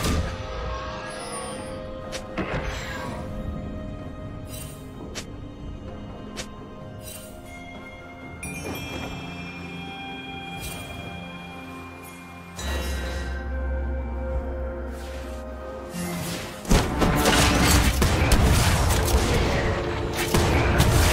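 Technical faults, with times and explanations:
1.36–4.22 s: Wi-Fi interference. The audio circuit rectifies a nearby radio's beacon every 102.4 ms. This gives steady ticking ten times a second, roughly 40 dB below the signal.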